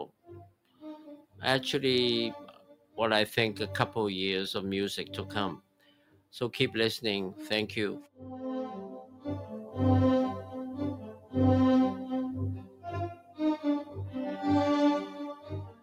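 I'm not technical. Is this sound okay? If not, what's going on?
No. Throughout the clip the level keeps rising and falling in a way the sound itself doesn't call for. Sudden, sharp parts come through, but anything held or fading sinks away, so the audio pumps and thins out. This is a noise suppressor applied to music or sounds. A filter built to clean up speech was left switched on. It treats steady tones and lingering tails as background noise and keeps turning them down.

At times the drops get deep enough to hear as clear dips: from 0.07 to 1.38 s, 2.53 to 2.98 s, 5.57 to 6.34 s, 8.03 to 8.21 s, 9.05 to 9.76 s, 10.44 to 11.35 s, 12.57 to 13.98 s, and from 15.08 s to the end. Each of these is sound cut by the noise suppressor. In each stretch the filter mistook part of the sound for noise and pulled it down much further than the rest. Sustained parts fade or are cut short, leaving gaps lasting from a fraction of a second to most of a second.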